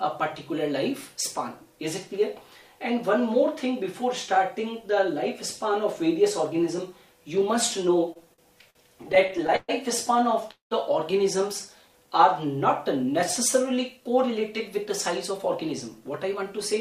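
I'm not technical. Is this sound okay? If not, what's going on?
No, there are problems in the second half, all from how the audio travelled over a network connection.

From 8.13 to 9.70 s there are repeated stalls (stutter). Pieces of the audio kept arriving late, so the receiver ran out of sound twelve times and stretched the last bit to cover each wait, the longest about 125 ms. Nothing is lost, but the sound drags and hiccups.

At 10.51 s comes a call audio freeze, likely caused by the connection holding data back briefly. The sound hangs for about 0.2 s, trailing off into roughly 0.13 s of silence, then picks up exactly where it stopped, a short pause inserted.

From 11.81 to 12.08 s there is a jitter buffer slow-down. The receiver was running short of audio in reserve, so it repeated tiny slices of sound to buy time, adding 47 ms. The audio plays at 85% speed with unchanged pitch and sounds drawn out.

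From 13.97 to 14.87 s and again from 15.31 to 16.74 s there is a jitter buffer speed-up. Too much audio had piled up, so the receiver trimmed tiny slices, about 70 ms in each stretch. The sound runs at 106% and then 105% speed, a little hurried but at the same pitch.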